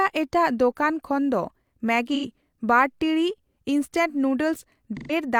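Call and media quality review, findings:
AAC frame loss with concealment, 2.14–2.25 s: smeared, noisy patch of about 85 ms just before "ᱵᱟᱨ ᱴᱤᱲᱤᱡ ᱤᱱᱥᱴᱮᱞ". Length fits two lost AAC frames. The decoder re-synthesises from the last good spectrum.

Same fault, 4.97–5.12 s: about 128 ms, fitting three lost frames.

Unlike a hard dropout, there is no silent gap or click. The gap is filled with spectrally plausible but phasey, scrambled sound.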